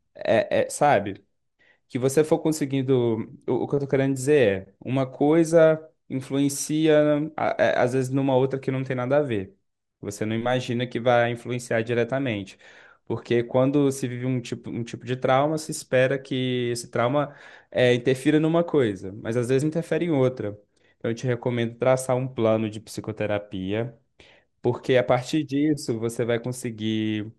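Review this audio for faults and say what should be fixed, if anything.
The speech sounds dull and gurgly throughout, grainy, with top end flickering in and out. That's likely MP2 compression short of bits, fitting roughly 80 kbps: upper sub-bands switch off and the rest get coarsely quantised. Encode at a higher bitrate or avoid MP2.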